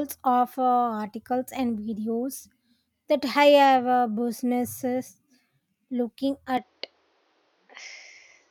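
A speech recording. At 6.57 s the sound turns duller and stays that way to the end. Nothing reaches above 6.7 kHz. A faint new noise floor appears, with no gap and no clear level jump. The likely cause is the input switched to a poorer device.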